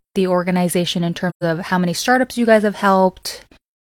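From 1.29 to 1.43 s the speech fades into a short silent gap and fades back, with soft rather than abrupt edges. This is AAC frame loss with muting. The decoder zeroed the missing spectrum, and the overlapping windows smoothed each edge. About 128 ms of dropout fits roughly three lost frames.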